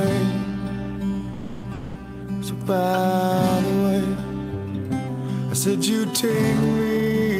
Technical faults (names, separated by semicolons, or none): call audio freeze; long network dropout; jitter buffer speed-up